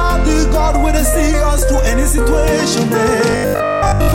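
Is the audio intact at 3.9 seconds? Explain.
No, at 3.9 seconds you're in the middle of robotic sound from repeated short buffers, which runs from 3.30 s to the end. It comes across as a rigid, metallic buzz pitched at 50 Hz that only loosely follows the underlying sound. The likely cause is fresh audio arriving too seldom, so the playback keeps looping a 20 ms chunk to fill the gaps. Most of that stretch is repeats rather than real audio, and the loop rate is what fixes the pitch.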